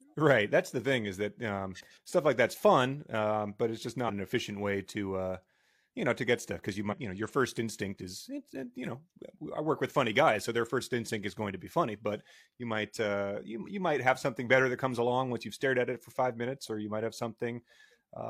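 At 6.88 to 6.94 s, right after "get stuff because you" and before "you know your first", compressed frames are skipped. A short stretch of speech, around a tenth of a second, never plays, which fits about two 46.4 ms frames either missing from the stream or rejected by the decoder as damaged. The audio jumps forward.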